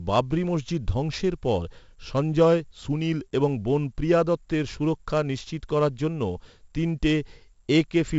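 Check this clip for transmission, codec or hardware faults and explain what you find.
One codec fault runs through the whole clip. From start to end, a gritty hiss rides every loud syllable, sharp attacks distort, and nothing sounds above 7.7 kHz. This is 4-bit ADPCM compression, which fits a 64 kbps stream.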